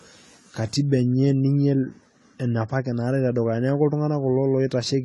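Speech, and it sounds like likely AAC compression all the way through: nothing above 11.5 kHz, dull smeared sibilants, audible warble, which fits a bitrate around 32 kbps.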